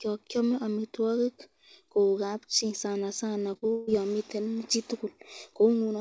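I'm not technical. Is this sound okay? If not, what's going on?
No. There are three small breaks close together, all just after "kabchi sanasana" and before "yon miten".

The first, from 3.54 to 3.57 s, is a short concealed packet loss. About 20 ms of the call arrived too late, and the receiving phone covered the hole by stretching the sound that came just before it. You hear a tiny smear or wobble rather than a gap. It differs from the next problem because it is so short.

Right after, from 3.57 to 3.64 s, comes a burst of packet loss. Several pieces in a row, about 40 ms of sound, went missing together. The phone kept the last sound going as a held buzz or hiss and faded it down before the real audio returned. That longer, fading fill-in is what separates it from the brief smear before it. The part that was lost is simply gone.

Then, from 3.72 to 3.89 s, the sound is replaced for about 0.17 s by a continued buzz or hiss that fades, and then "yon miten" resumes. 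This is likely a long network dropout, where nothing got through for a stretch. It is longer than the burst, but the fill-in never drops to silence. The call itself still has the slightly dull, phone-like sound of this kind of connection.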